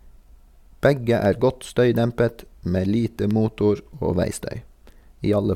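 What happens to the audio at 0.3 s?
Right around there you're in the middle of periodic USB or driver dropouts, which run from 0.23 s to 5.36 s. Roughly once every 1.02 s, something stalls the USB bus or the audio driver, and a tiny sliver of the speech, well under a millisecond, drops out to silence. You hear a clean, evenly spaced tick on each one, about seven across that stretch, and they only show up while there's signal.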